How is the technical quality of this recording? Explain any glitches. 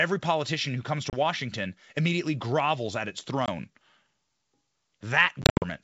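The recording has three dropouts caused by packet loss on an ADPCM call. The underlying G.722 wideband coding sounds clear up to 7 kHz, which fits 64 kbit/s.

At 1.10 to 1.17 s, after "politician who comes", about 30 ms is missing. At 3.46 to 3.49 s, after "immediately grovels at its", 20 ms is gone. At 5.42 to 5.64 s, 160 ms drops out in scattered gaps over 200 ms, with the longest lasting 70 ms. Lost packets become hard-edged silence. The decoder's predictor and step size then drift from the sender's. So the sound returns slightly distorted before settling.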